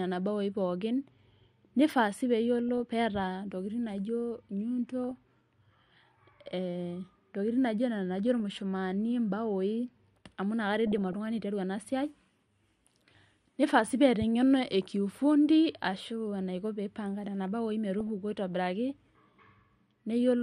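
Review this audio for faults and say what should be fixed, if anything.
The whole recording has a dull, granular quality with a plainly audible gurgle under the speech. This is likely MP2 compression at a low bitrate, consistent with something around 80 kbps. With so few bits, the encoder switches off the upper sub-bands and quantises the remaining ones coarsely, so the top end disappears and what's left sounds rough. To prevent this, encode at a higher bitrate or choose a more efficient codec for this material.

DAB burbling occurs five times: from 2.69 to 2.80 s, at 5.11 s, at 8.40 s, from 10.87 to 11.13 s, and from 17.99 to 18.09 s. In each case, bit errors at a rate of a small fraction of a percent slipped past the error correction into the MP2 data. The corrupted samples put short blips of noise into single sub-bands, and corrupted scale factors make sub-bands jump in level for up to a frame. 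The longest burst, around 11 s, spans 16 frames. Better reception, through a stronger signal, a better antenna or a different receiver position, would prevent it.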